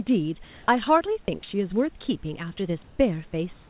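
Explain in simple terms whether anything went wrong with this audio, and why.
The sending side most likely has a voice detector that stops sending audio during pauses, so the receiver invents filler noise. This comfort noise in place of the background is heard from 0.44 to 0.68 s, 2.84 to 2.99 s and 3.53 s to the end. The real room background is swapped for a smooth, featureless hiss.

The same detector was likely slow to notice speech starting again at 0.66 to 0.68 s. Because of this onset clipped by the voice detector, the first 20 ms were never sent, so the speech jumps in abruptly without its soft beginning.

At 1.25 to 1.28 s the detector likely mistook part of the speech for background and stopped sending. In this sound dropped by the voice detector, about 20 ms of speech is lost and brief filler noise stands in for it. Throughout, the phone-style connection carries nothing above 4 kHz, giving the narrow telephone sound.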